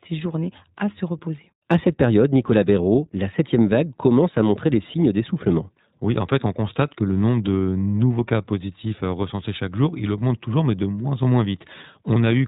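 Throughout, the speech passes through the iLBC codec, likely at 15.2 kbps with 20 ms frames, cutting everything above 3.8 kHz and leaving a plainly rough, synthetic edge.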